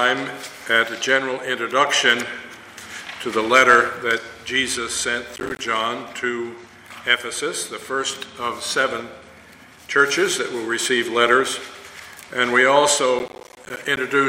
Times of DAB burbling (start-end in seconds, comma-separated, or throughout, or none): 12.76-12.98